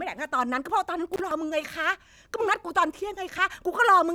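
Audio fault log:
1.14 to 1.20 s, intermittent contact. The speech cuts out for about 34 ms. Small crackles mark the moment the connection opens and the moment it closes again. While the line is broken, the signal path is interrupted, so only a faint hiss remains in the gap. The cut is short and sharp, with rough edges, much like a loose plug or cable shifting for an instant.
1.31 s and 3.38 s, dropped buffer (overrun). Each time the speech jumps forward with no silence between. About 20 ms of sound is missing at the first point and about 10 ms at the second. The likely cause is a buffer overrun. The hardware overwrote samples before the software collected them, so that stretch was lost and the two sides were joined directly.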